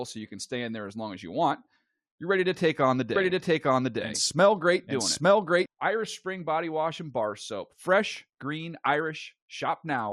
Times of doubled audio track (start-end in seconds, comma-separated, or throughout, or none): 3.16-5.66